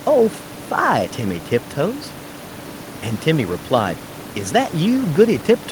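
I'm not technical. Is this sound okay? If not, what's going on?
Yes, nothing is wrong here.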